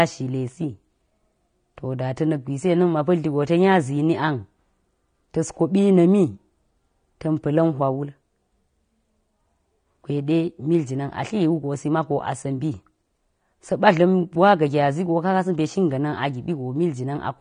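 From start to finish the speech sounds dull and smeared, with nothing above about 9.7 kHz and a plainly audible warbling, fizzy texture on sibilants. This is likely AAC compression, with the AAC-LC encoder starved of bits, which fits a rate near 32 kbps.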